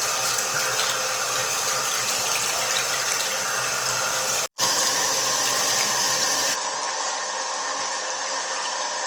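A recording of everyday sounds, likely passed through Opus compression in its music (CELT) mode at a low rate, around what a 24 kbps stream would give. The encoder keeps energy in every band up to about 20.2 kHz by filling starved bands with folded or synthetic content rather than leaving gaps, so there is little swirling. Instead, the damage is plainly audible as grain: tonal parts turn rough and noisy across the whole clip. At 6.54 s the input switched to a poorer device, which is likely what happened since the band abruptly narrows to nothing above about 8.1 kHz, with no gap at the changeover. From there to the end the sound is duller and boxier, drops a few decibels in level, and carries a faint new background noise well below the signal.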